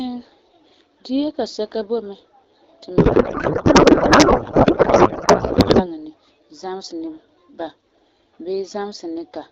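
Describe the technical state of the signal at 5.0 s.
At 5.0 s the speech is replaced by garbled noise and warble that barely tracks it, from 2.98 s until just before "ni zamesɛ ni ba" at 5.87 s. This is a codec payload misread: the AMR-WB decoder is parsing frames with misplaced fields, which fits octet-aligned packing read as bandwidth-efficient.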